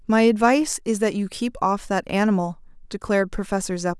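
Speech recording, with no technical faults to report.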